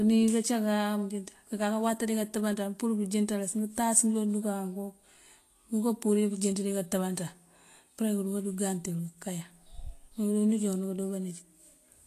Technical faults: Vorbis compression

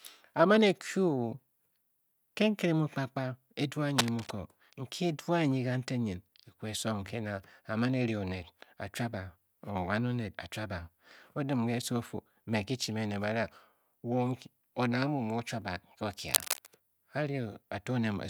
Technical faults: cable scratch noise

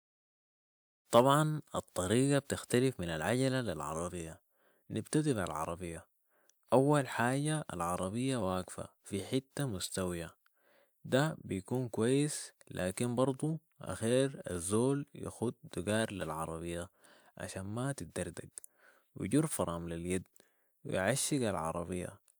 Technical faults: none

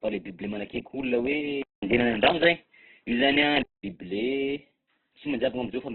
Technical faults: Opus compression; input switched to a poorer device

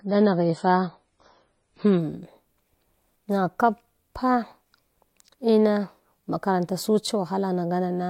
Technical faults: adaptive stream starting at a low bitrate

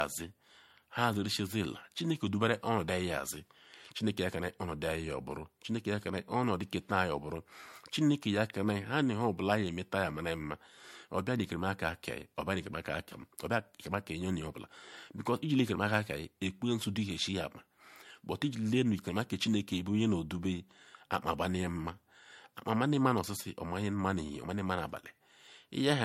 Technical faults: generation loss

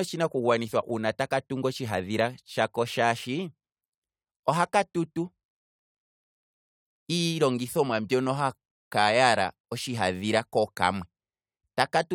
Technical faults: none

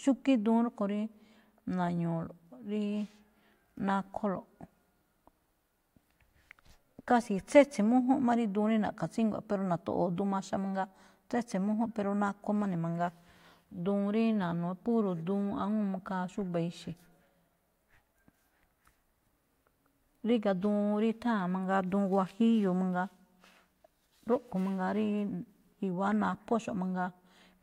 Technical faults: none

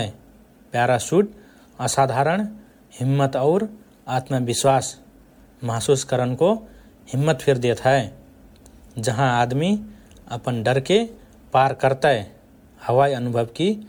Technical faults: generation loss

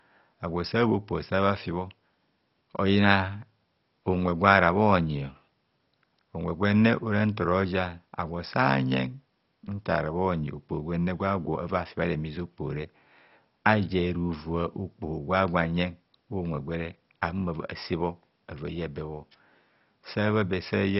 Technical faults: MP2 compression

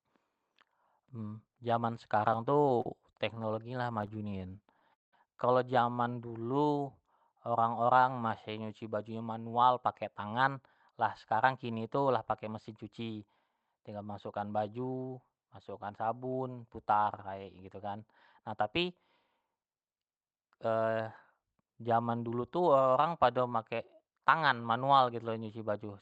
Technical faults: repeated stalls (stutter); jitter buffer slow-down; jitter buffer speed-up

